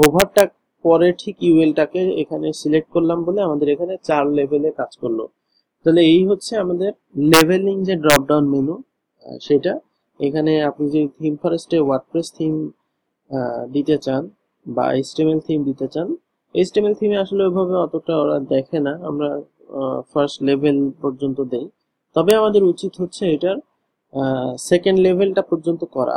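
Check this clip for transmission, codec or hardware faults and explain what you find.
Integer overflow occurs at 0.03–0.40 s (about 1 dB over), 7.34–7.41 s (about 2 dB), 8.10–8.16 s (about 3 dB) and 22.31 s (barely over). Peaks exceeding the integer limit wrap to the opposite sign, producing violent cracks. The waveform shows sudden large sign flips, and the spectrogram shows broadband vertical streaks.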